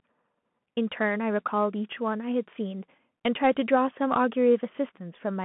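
Right through the speech you get the Bluetooth CVSD headset codec: a 150 Hz to 3.4 kHz line band, nothing above 3.8 kHz, and scratchy, granular one-bit slope distortion, consistent with 64 kbps.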